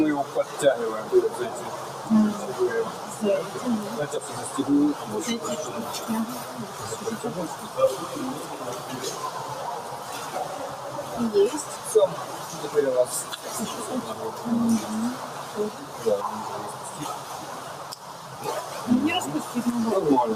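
From start to finish, a noise suppressor applied to music or sounds shapes the whole clip. A processor built for speech is treating sustained tones, room ambience and reverb as if they were noise. Sharp onsets pass largely intact. Held tones and decaying tails are then pulled down, by roughly 10 dB at the deepest. The level keeps swinging as the suppressor clamps and releases. The result is audible pumping and flutter, and the sound thins out between attacks.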